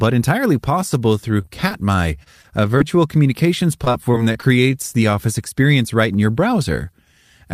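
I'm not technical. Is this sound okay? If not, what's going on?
No. The speech has two kinds of connection trouble.

The first is repeated packet loss, which gives a robotic sound. From 1.41 to 2.82 s, right after "entirely possible through", and again from 3.84 to 4.44 s, just before "the office experience right", small pieces of the audio never arrived. Each break lasted at most about a quarter of a tenth of a second. The receiver filled each hole by stretching the last sound it had, so these stretches come out choppy, with pieces missing.

The second is a jitter buffer slow-down. Between 4.18 and 4.73 s, leading into "the office experience right", the receiver needed more stored audio and repeated tiny slices of sound to build up its reserve. That stretch plays about 7% slower at the same pitch, adding roughly 48 ms, so the sound is a little drawn out.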